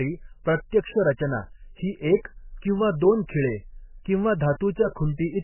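Throughout, the speech sounds watery and swirly, with nothing above 3 kHz. This heavy damage is likely from MP3 compression at a very low bitrate, near 10 kbps.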